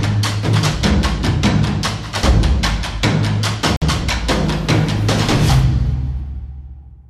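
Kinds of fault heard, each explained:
Gap between stream segments: at 3.76 s the sound stops dead for about 54 ms with hard edges, where two segments' time stamps fail to meet and the player inserts silence. Unlike a dropout, nothing is missing; everything after the hole simply arrives later.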